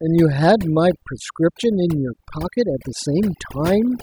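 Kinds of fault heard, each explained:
Overdone noise removal: across the whole speech clip the gaps between phrases collapse to near silence, broken only by twinkling, warbling specks. A noise reduction stage was pushed too hard on a noisy recording, so any frequency band sitting close to its noise estimate gets pulled far down or switched off. Quiet parts of the speech fall into that range and vanish along with the background noise.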